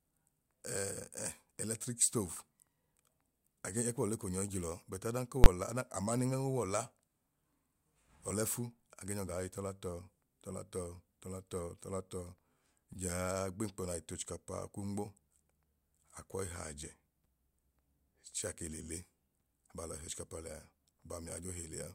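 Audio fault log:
5.44–5.46 s, invalid numbers at full scale: a calculation produced infinite or invalid values that were forced to the largest positive or negative value, holding the output flat at one extreme far beyond the speech peaks for a 20 ms block. With so short a block the start and end merge into one loud bang in the speech.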